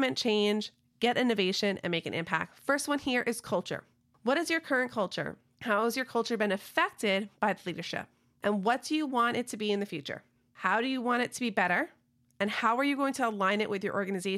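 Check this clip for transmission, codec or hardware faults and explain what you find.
Nothing stood out on listening to the recording.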